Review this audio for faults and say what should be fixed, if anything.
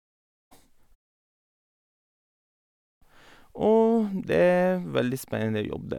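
Nothing needs fixing, as the review turns up no faults in this audio.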